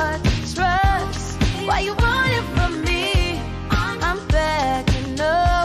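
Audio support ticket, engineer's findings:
No faults found on listening.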